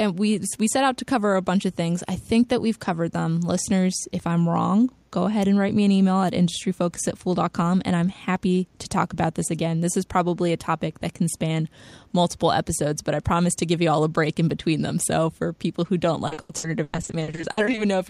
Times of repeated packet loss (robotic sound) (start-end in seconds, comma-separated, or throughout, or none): 16.27-17.79